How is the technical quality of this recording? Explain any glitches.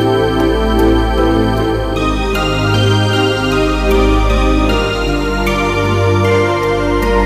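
The recording is marred by one fault. Hard clipping runs throughout: peaks are pushed about 3 dB past the stage's ceiling, so roughly one percent of samples are flattened, adding high harmonics heard as crackle on loud moments.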